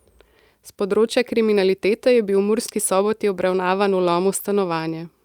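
Near the end of the speech, from about 4.01 to 4.82 s, there's a stretch of scattered short gaps: roughly five tiny holes where packets went missing or arrived too late, the longest only around 10 ms. The receiver papered over each one by carrying the last bit of sound forward, about 50 ms in all, so the speech stays clear but picks up little ticks and smeared hiccups. That patching also stretches the passage by about 12 ms.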